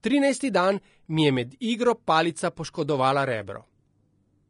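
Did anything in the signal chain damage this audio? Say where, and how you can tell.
Yes, at the codec stage: likely low-bitrate Vorbis compression throughout. Nothing survives above 10.6 kHz, and the coarsely quantised treble makes the speech hiss and sound grainy.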